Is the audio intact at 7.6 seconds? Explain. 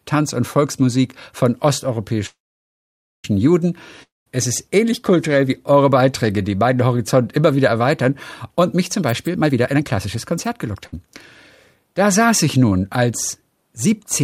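Yes, at 7.6 seconds the speech plays through intact, with no dropout, click, distortion or other fault at that moment.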